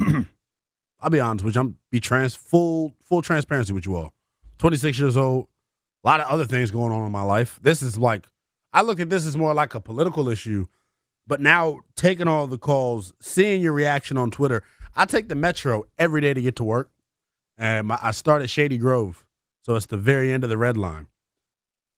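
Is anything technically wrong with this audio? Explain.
No, there is nothing technically wrong with this audio.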